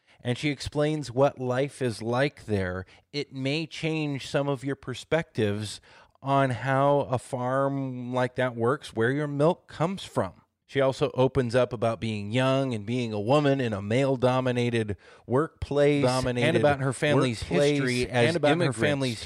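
Speech, with a doubled audio track from 15.97 s to the end: a second full-band copy, about as loud as the original and trailing by roughly two seconds, cuts in abruptly with no decay or room colour, likely from a slower second capture path or a misaligned edit.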